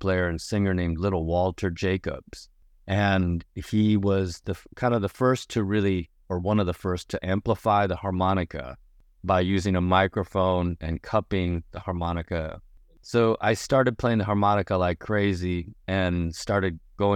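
No technical faults can be heard anywhere in the recording.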